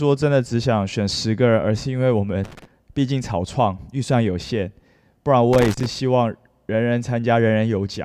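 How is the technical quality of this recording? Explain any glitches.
The speech is marred by two bursts of loose connector crackle. The first runs from about 2.44 to 2.65 s, the second from 5.53 to 5.86 s. A worn or dirty contact in the cable path is flickering open and shut, chopping the signal and throwing pops from any DC on the line, so each burst is ragged scratching over the speech. The crackle in each burst is irregular rather than evenly timed.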